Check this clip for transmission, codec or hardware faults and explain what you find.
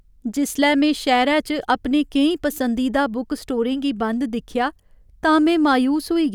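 No faults can be heard anywhere in this speech recording. There is nothing in it to explain.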